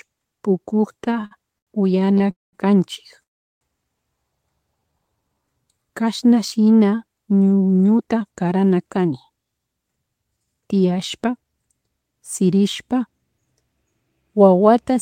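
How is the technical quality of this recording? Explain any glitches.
The recording has clear network-delivery problems in its first 12 seconds: stuttering, two dropouts and stretches that run too slowly and then too quickly.

From 0.97 to 2.27 s the speech shows repeated stalls (stutter). Packets kept arriving late, the jitter buffer ran dry 14 times, and the receiver stretched the last sound to fill about 296 ms, nearly a quarter of that span. The longest fill was 86 ms. It sounds choppy and dragging. On a waveform it appears as short smeared repeats, and on a spectrogram as flat, copied bands.

Two call audio freezes follow, at 2.31 to 2.55 s and at 3.23 to 3.63 s. The audio stops, then resumes where it left off, inserting 220 ms and 381 ms of pause. The likely cause is packets held up until the buffer emptied. The first gap is mostly silent and the second almost entirely so. Both show as flat lines in the waveform and blank columns in the spectrogram.

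From 4.80 to 6.27 s a jitter buffer slow-down plays the speech at about 88% speed with unchanged pitch. The receiver repeated pitch periods to rebuild its reserve, adding 191 ms. Sounds feel drawn out. On a spectrogram, harmonics stay at the same height but segments stretch wider.

From 7.84 to 11.54 s a jitter buffer speed-up runs the speech about 13% fast. The receiver trimmed short pitch-period pieces to cut excess delay, removing roughly half a second in total. The speech sounds hurried at normal pitch. A spectrogram shows compressed segments, and the waveform shows slightly shortened syllables.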